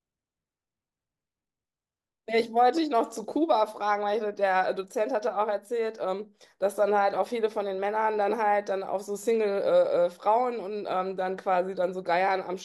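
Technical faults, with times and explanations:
No technical faults can be heard in this speech.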